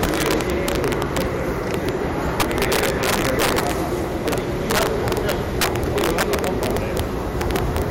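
Right through the clip there's integer overflow: the level runs about 15 dB too hot, and instead of being limited, the peaks wrap around to the opposite sign. Only around one percent of samples go over, but each one snaps into a harsh crack on the loudest moments, far nastier than ordinary clipping.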